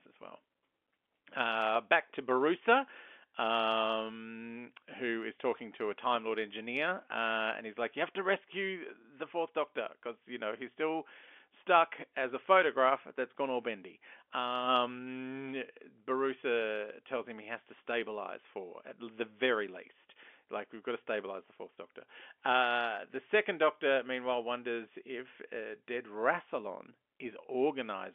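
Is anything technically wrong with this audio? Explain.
No, no technical faults.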